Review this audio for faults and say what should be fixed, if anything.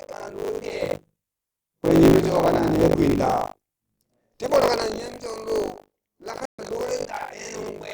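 Buffer tearing runs through the whole speech clip as a rattling 50 Hz buzz, which fits a 20 ms buffer period. The writer and reader of the ring buffer have drifted so they cross every period, leaving roughly a third of each buffer filled with audio around 70 ms old, with hard joins on both sides. Unlike mains hum, the buzz follows the signal and disappears when nothing is playing. To prevent it, keep the write position a safe margin ahead of the hardware read pointer and resynchronise them when they drift.

A stream reconnect occurs from 6.45 to 6.63 s. There is 131 ms of silence, then the audio picks up with roughly 150 ms of material skipped, because the player lost the connection, reconnected and restarted its decoder mid-stream. A plain dropout would resume exactly where the sound stopped, but here content is missing. To prevent it, stabilise the connection and give the player enough buffering to ride through brief outages without reconnecting.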